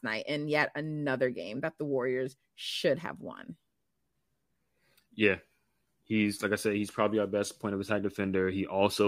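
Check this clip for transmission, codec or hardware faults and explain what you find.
Nothing stood out on listening to this speech recording; no transmission, codec or hardware problem could be heard anywhere in it.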